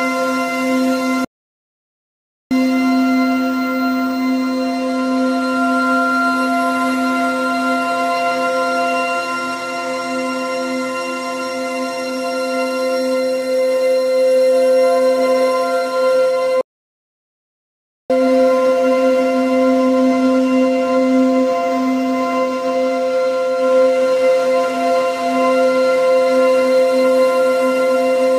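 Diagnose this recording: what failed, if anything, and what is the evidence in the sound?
Playback stall in the player: the sound halts from 1.25 to 2.51 s and from 16.61 to 18.1 s, too long for a brief dropout, likely from data starvation.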